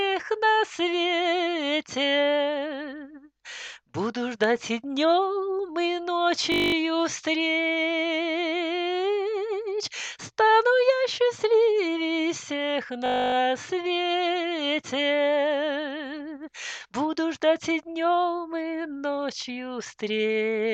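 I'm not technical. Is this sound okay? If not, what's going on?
No. Twice the sound briefly turns into a buzz: from 6.52 to 6.74 s, and from 13.06 to 13.34 s. This is a system hang loop. The computer stalled for a moment while the sound hardware kept replaying the same 20 ms snippet, about 11 and 14 times, which produces a steady 50 Hz buzz. Playback then resumes where it left off, with little or nothing missing.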